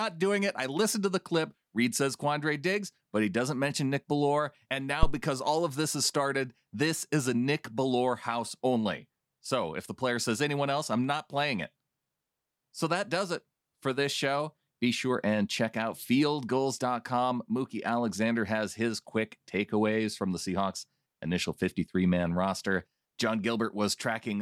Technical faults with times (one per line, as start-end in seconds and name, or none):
5.03-5.17 phantom power thump